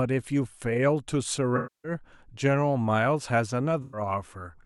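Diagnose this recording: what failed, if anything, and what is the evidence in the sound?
Smeared, noisy patches at 1.56–1.92 s and 3.82–4.01 s point to AAC frame loss with concealment at the codec stage, the decoder rebuilding gaps from the last good spectrum.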